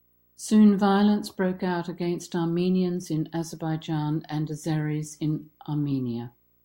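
Right from the start and running the whole way under the speech there's video or display buzz: a screen or video cable is leaking into the audio path. You get a low buzz at 59.94 Hz, the field rate of the picture, with a fizzy hash riding on top, plus a thin whine up at 15.7 kHz from the line scan. It sits well down, roughly 40 dB under the speech.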